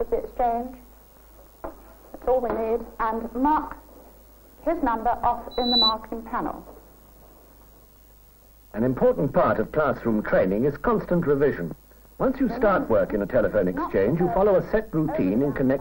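At 5.51 s a loudspeaker feedback squeal kicks in: a pure 4 kHz tone swelling over about a third of a second until it sits a few dB above the sound, then cutting off at 5.94 s. The mic was hearing its own speaker, and that frequency ran away.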